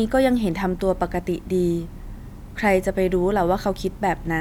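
Speech recording, no technical faults detected.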